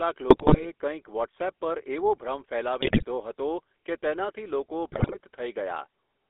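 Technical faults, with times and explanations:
Throughout: GSM full-rate codec. The speech is confined to roughly 300 Hz to 3.5 kHz and has a buzzy, gravelly roughness. The coder models the vocal tract and excites it with sparse regular pulses, so fine detail is lost.
0.30–0.70 s, 2.80–3.04 s and 4.92–5.18 s: GSM bit errors. The voice breaks into squawks, pops and gargling. Corrupted filter, pitch or gain values reach the decoder, bending the spectrum or jolting the level frame by frame.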